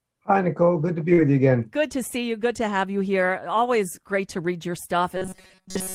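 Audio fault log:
1.13–1.19 s, short concealed packet loss: Between "to be" and "you again", 40 ms of audio never arrived in time. The receiver extended the preceding sound to cover the gap, then crossfaded back, leaving a brief smeared wobble where the real signal was missing.
1.17–1.19 s, lost packet rebuilt from error correction: Within that same stretch, just before "you again", one 20 ms packet was recovered from the low-bitrate copy carried in the following packet. The decoder played this coarser version, so there is no gap, but that moment sounds rougher and grainier.
5.17–5.95 s, robotic sound from repeated short buffers: After "great to read your", the sound becomes a rigid metallic buzz at 188 Hz to the end. Most of this stretch is likely a very short buffer of about 5 ms replayed while fresh audio was skipped, imposing that fixed pitch.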